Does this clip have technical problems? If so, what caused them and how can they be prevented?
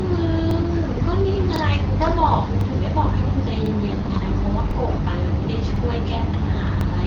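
Yes. A short stutter repeats at 0.51, 1.56, 2.61, 3.66, 4.71, 5.76 and 6.81 s, each a 50 ms fragment played twice. These are overlapping chunks: the audio was handled in 1.0 s blocks, and each block began 50 ms before the previous one ended, so every join doubles a sliver of sound. To prevent this, align chunk boundaries exactly, or crossfade and trim the overlap when reassembling.

From 0.93 to 1.03 s and again from 3.86 to 4.24 s the speech turns hoarse, scratchy and gargly while keeping its rough pitch and loudness. These are AMR bit errors: a weak link flipped around 5 to 7 percent of the less protected bits in consecutive frames. The excitation pulses landed in the wrong places and the fine pitch, gain and spectral values were corrupted, while the checks on the critical bits still passed. To prevent this, improve the radio link or add stronger error protection for all bits so damaged frames are concealed instead of decoded.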